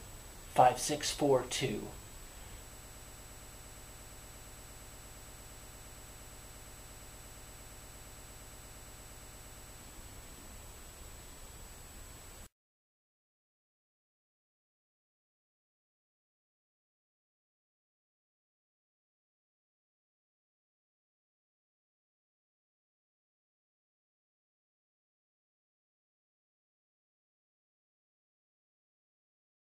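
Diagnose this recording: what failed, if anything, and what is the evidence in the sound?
A broken-record loop runs from 2.73 s to 9.81 s. A fragment of about 116 ms repeats exactly, back to back, around 61 times, giving a rapid mechanical buzz-like pulsing at roughly 8.6 repeats per second. The likely cause is a stall at the playback or buffer stage, where the last held block kept being resent. Unlike stutter or echo, each repetition is identical and nothing decays or moves forward, and the audio that should have filled those seven seconds is lost.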